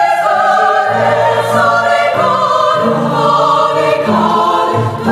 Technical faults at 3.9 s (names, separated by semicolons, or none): gain pumping